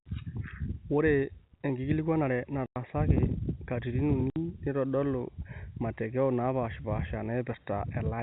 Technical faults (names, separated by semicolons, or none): packet loss filled with silence